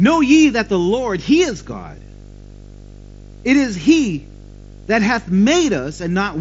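Video cable coupling causes video or display buzz throughout: a 50 Hz buzz with hash above it, plus a 15.6 kHz whine, roughly 15 dB below the speech.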